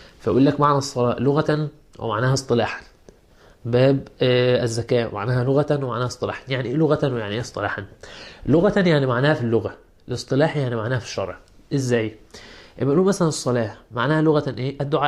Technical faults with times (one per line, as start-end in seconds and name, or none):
none